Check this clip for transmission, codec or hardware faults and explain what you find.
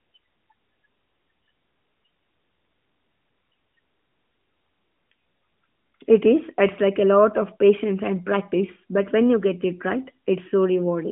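Nothing amiss turns up: the speech sits in the 150 Hz to 3.5 kHz band of a narrowband mobile call with nothing above 3.8 kHz, and its light coding texture fits the AMR narrowband mobile codec in its highest-quality 12.2 kbps mode.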